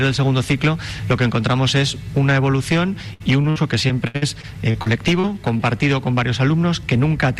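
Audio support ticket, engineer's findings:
Choppy, robotic stretch 3.13–5.61 s; repeated packet loss, eleven gaps up to 70 ms, each patched by extending the last sound, roughly a sixth of the span concealed.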